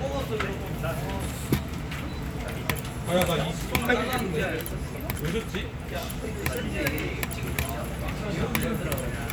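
Overlap between stream segments causes brief skips at 1.21, 3.18, 4.17, 5.15, 6.14 and 8.11 s, spaced at whole-second multiples that match 1.0 s segments. At each boundary, the time stamps of adjacent segments overlap, and the player discards the overlapping portion even though that audio was not duplicated. Between 6 and 19 ms of sound is lost each time, so the waveform jumps abruptly. Each jump is heard as a small click or tiny skip.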